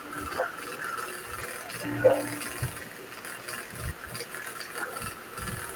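At 1.41 to 1.43 s there is a lost packet rebuilt from error correction. The sound doesn't drop out. Instead, a brief 20 ms stretch turns rougher and noisier. The length points to a single lost packet. The following packet carried a low-bitrate backup copy of it, and the decoder played that copy in its place. The patch keeps the speech continuous, but the reduced detail is audible as a short grainy blemish.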